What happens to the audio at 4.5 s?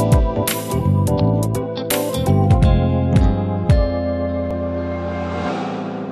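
At 4.51 s there is an overlap between stream segments. Two adjacent segments claimed the same stretch of time, so the player discarded the overlapping part even though that sound had not actually been repeated. Roughly 6 ms of audio is lost and the waveform jumps abruptly, producing a brief click or tiny skip. On the waveform it appears as a sudden step; on a spectrogram, as a thin vertical broadband line.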